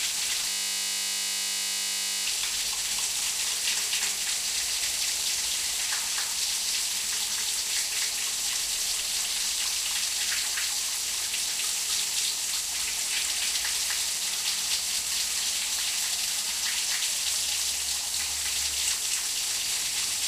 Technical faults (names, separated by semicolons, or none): system hang loop